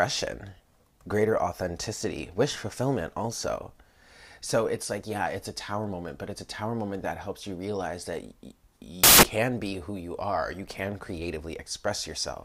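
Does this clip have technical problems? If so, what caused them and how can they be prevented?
Yes. From 9.04 to 9.23 s the sound turns into loud, harsh broadband noise, which points to samples built from the wrong bytes. The reader assembled each sample from misaligned or swapped bytes, so the busy low bits dominated. Checking byte order and alignment at every read boundary prevents this.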